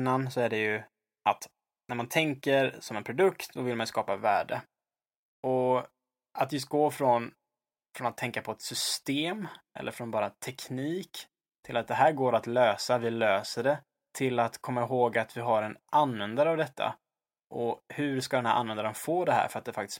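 Nothing in the recording stood out as a technical problem on listening.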